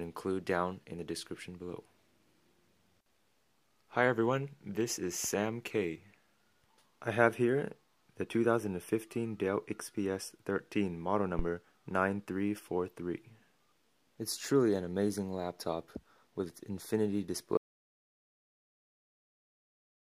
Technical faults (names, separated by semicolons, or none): phantom power thump; audio dropout to silence